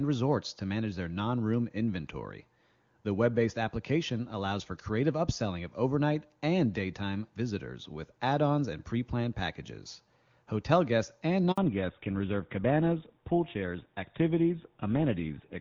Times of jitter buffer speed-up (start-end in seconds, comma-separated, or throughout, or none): none